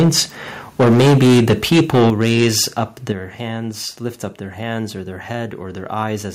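From 0 to 0.2 s, and again from 0.79 to 2.62 s, the speech crackles harshly. This is likely microphone overload: input driven about 5 dB, then about 13 dB, past the converter's limit. The waveform shows flat-topped peaks, and the spectrogram shows smeared broadband energy. At 2.1 s and 3.12 s, voice and background drop abruptly by about 8 dB and about 7 dB. The likely cause is the call software stepping the microphone volume down, which appears as sharp downward steps in the waveform envelope.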